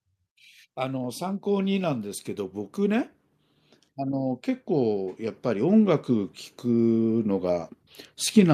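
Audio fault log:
3.95 to 7.79 s, automatic gain rising: the level creeps up by about 8 dB over nearly four seconds, and the voice and the room noise behind it swell together. That shared lift is the giveaway. The automatic gain control decided the input was too quiet and slowly turned itself up. Because it's boosting the whole signal rather than the talker, the background comes up right along with the speech instead of staying put.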